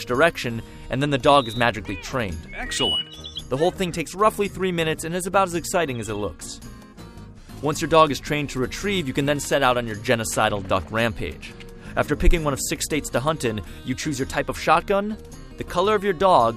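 No technical faults are audible anywhere in the recording.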